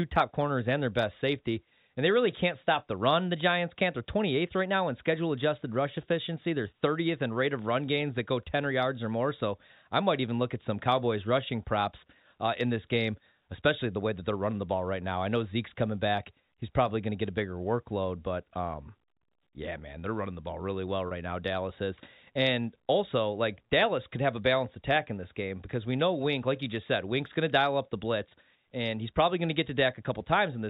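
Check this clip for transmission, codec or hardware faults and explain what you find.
Two brief dropouts, both packet loss with pitch repetition. At 21.08 s, right after "the ball really well", about 30 ms is lost; at 28.29 s, between "to dial up the" and "and he's probably going", about 20 ms. Each time the receiver fills the hole by looping the last pitch cycle, so you get a tiny held, buzzy blip instead of a gap. All of this rides on G.711 telephone coding, which keeps everything under 4 kHz.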